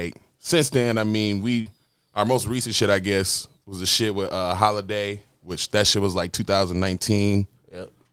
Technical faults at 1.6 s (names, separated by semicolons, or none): short concealed packet loss